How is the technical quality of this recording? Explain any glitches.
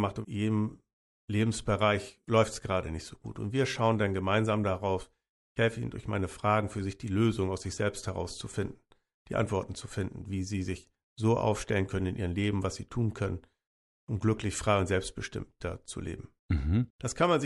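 The recording has one audible technical fault, present for the entire clip.

Bluetooth LC3 compression, throughout: the speech has a plainly audible breathy, grainy edge, likely from LC3 coding that fits 10 ms frames at roughly 48 kbps, with upper detail replaced by noise fill.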